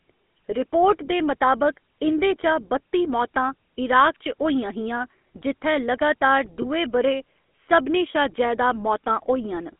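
Throughout, the speech has passed through the GSM full-rate codec. That coder replaces the real voice with a vocal-tract model excited by sparse, regularly spaced pulses, at what sounds like the 13 kbps rate, and the channel is cut to roughly 200 Hz to 3.4 kHz. The coarse excitation gives the voice a plainly audible buzzy, gravelly texture, and the narrow band removes low body and upper brightness, leaving a thin, telephone-like sound.

From 6.62 to 6.65 s, lost GSM frames interrupt the stream. The decoder got no usable data for about 20 ms, so it repeated the settings of the last good frame instead of the missing audio. Because the gap is so short, it sounds like a brief rough, metallic ring held over the sound. It recovers before the level starts to fade.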